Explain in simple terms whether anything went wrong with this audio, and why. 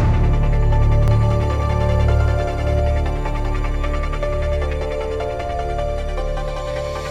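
A doubled audio track runs from 1.08 to 2.80 s: a quieter copy trails about a tenth of a second behind, likely from a second, slower recording path.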